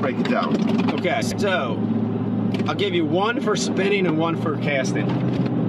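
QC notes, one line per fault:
1.22–1.41 s: frames out of order. Two adjacent blocks of about 93 ms were decoded in swapped sequence, so this 0.19 s stretch plays with its halves exchanged. It comes across as a brief garbled flutter, with the waveform jumping between discontinuous segments at the three joins. Each block length fits four frames of roughly 23 ms. Nothing is dropped, so overall timing is unchanged.
5.28–5.48 s: frames out of order. The same swap recurs near the end. Two blocks of about 93 ms are exchanged over roughly 0.2 s, producing the same fluttering jumble and no net time loss.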